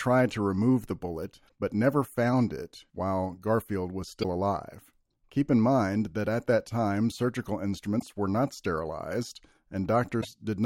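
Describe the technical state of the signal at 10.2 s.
Damaged data in a compressed stream, from 10.18 to 10.25 s: corrupt frames throw the decoder out of sync, producing a brief glitch.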